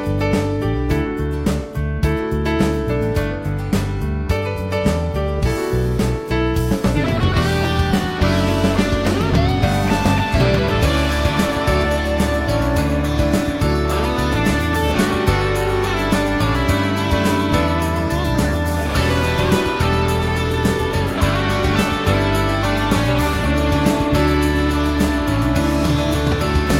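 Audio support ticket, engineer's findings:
Short glitches at 6.92–6.97, 10.31–10.36, 11.80–11.86, 14.91–14.96 and 23.41–23.46 s: damaged data in the compressed stream. The decoder drops sync and hunts for the next frame header each time.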